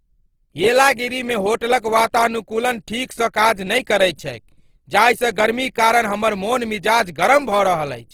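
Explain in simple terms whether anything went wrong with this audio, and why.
Throughout the speech, the sound turns rough and grainy, likely from Opus compression. Squeezing it into too little data fills detail with noise.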